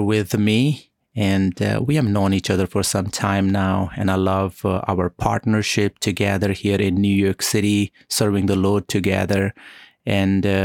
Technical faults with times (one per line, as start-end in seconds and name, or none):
none